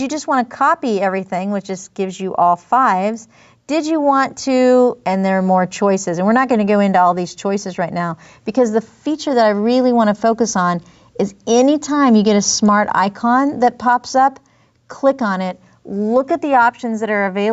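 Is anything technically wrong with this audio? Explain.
Yes. Gain pumping runs through the whole clip: the level is pulled down on each loud sound, a swing of around 5 dB, most likely from gain set far too high with a fast limiter pulling it back. On a waveform, the loud passages look flattened and squashed. The 8 kHz top edge on the spectrogram comes from the call path.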